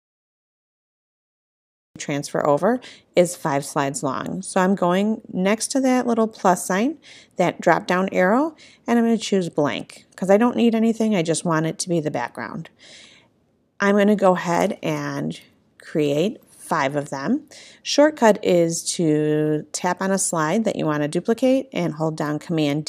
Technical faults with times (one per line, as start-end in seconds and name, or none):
0.00-1.96 cut-off start